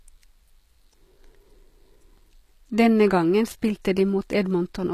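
Throughout the speech, the encoder has likely applied HE-AAC compression, coding only the lower spectrum and rebuilding the treble by copying lower bands upward, which fits a bitrate near 24 kbps. The s sounds turn plainly gritty and metallic, and nothing remains above 15 kHz.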